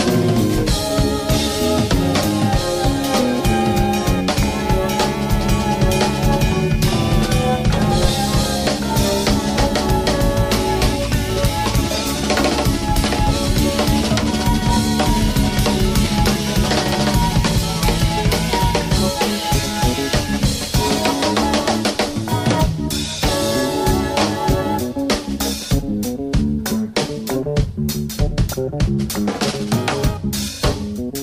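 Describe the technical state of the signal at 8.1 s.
At 8.1 s the signal carries a phantom power thump, running from 8.05 to 8.11 s. A supply voltage switched on or off while the input was live, and that sudden DC step reached the coupling capacitors, which pass it on as a brief low-frequency transient. It sounds like a short, deep thud, with a fast tail that dies away in about 13 ms.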